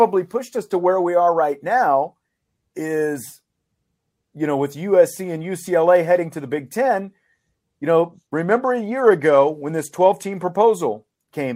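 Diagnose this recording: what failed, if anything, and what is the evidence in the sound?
The failure sits in the codec stage of a Bluetooth link: a Bluetooth SBC bit pool drop from about 8.03 s to 10.43 s. Under link congestion the encoder cut its bit allocation, and the sound fits a fall from a bit pool of 28 to roughly 13, near 102 kbps. For those 2.4 seconds the speech loses its upper sub-bands and turns dull, while coarse quantisation of the remaining bands adds a gritty noise floor until the rate recovers.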